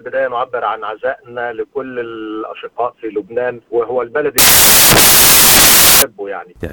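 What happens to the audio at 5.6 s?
At 5.6 s the audio has samples built from the wrong bytes, from 4.38 to 6.02 s. Misassembled bytes turn low bits into loud, harsh broadband noise.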